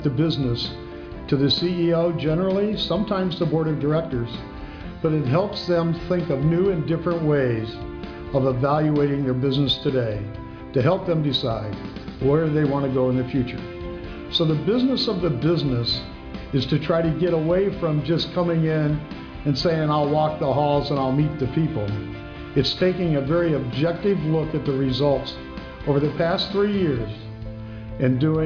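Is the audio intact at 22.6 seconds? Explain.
Yes, at 22.6 seconds the audio is intact, with no dropout, click, distortion or other fault at that point.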